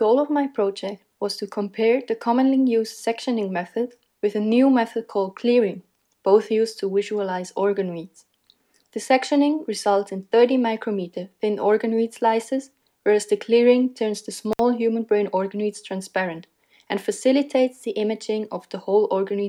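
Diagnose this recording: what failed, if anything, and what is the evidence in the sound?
Looks like an intermittent contact in the analogue wiring. At about 14.52 s the sound drops out for roughly 60 ms, with crackle at each edge, and comes back by 14.60 s. A loose plug or cable briefly lost connection and then reseated.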